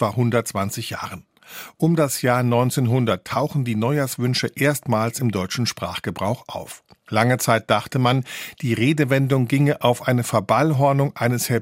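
No technical faults can be heard anywhere in the recording. Nothing in how the speech was captured or carried calls for comment at any point.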